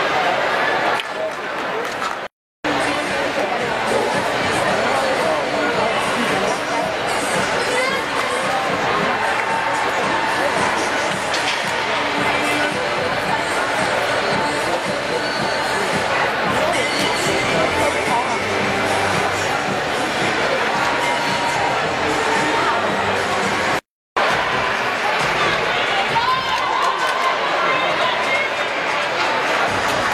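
Nothing is technically wrong with the audio.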